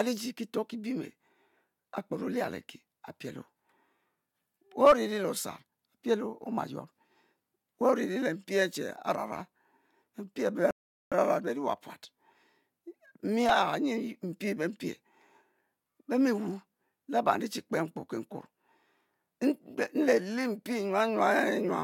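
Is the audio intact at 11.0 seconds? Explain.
No. At 11.0 seconds the speech is halted by a rebuffering stall that runs from 10.71 to 11.12 s. The player exhausted its downloaded audio, went silent, and waited for more data. That adds about 0.41 s of dead air. Unlike a dropout, where a stretch of sound is skipped and the speech jumps ahead, this gap removes nothing. The speech picks up exactly where it broke off, only later.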